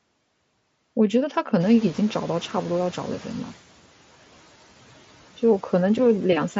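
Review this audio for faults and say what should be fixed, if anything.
Noise suppressor catching up, 1.6 to 3.53 s: the room noise jumps by about 16 dB at around 1.5 s, and the suppressor's noise estimate lags behind. The louder noise comes through with less reduction, then sinks by about 7 dB over roughly 1.9 s as the estimate adapts. The band limit near 7.7 kHz is the mSBC headset codec at work. To prevent this, give the suppressor a faster noise-floor tracking rate for sudden rises in background level.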